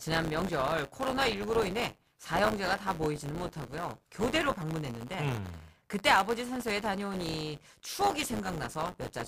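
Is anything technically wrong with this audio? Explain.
Yes, the speech carries buffer tearing from start to finish, heard as a steady robotic buzz at 100 Hz, which fits a buffer period of about 10 ms. The writer and the hardware reader cross inside each period, so around a tenth of every buffer holds audio from one lap earlier, roughly 20 ms stale, with hard joins on both sides. Unlike an underrun, there are no gaps or silences, and the buzz vanishes whenever the speech pauses.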